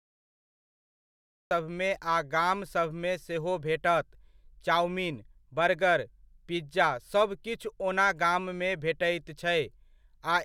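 For the first 1.51 s there's nothing but dead digital silence, and then the speech just snaps in at 1.51 s, already mid-sound. That's a cut-off start: capture or the stream got going late, so the front of the speech never made it in. You don't get any natural attack or fade-in; the level jumps straight from zero to speech. It feels like someone hit record a beat too late.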